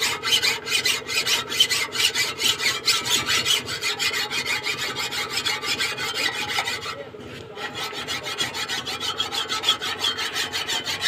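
No faults can be heard anywhere in this recording.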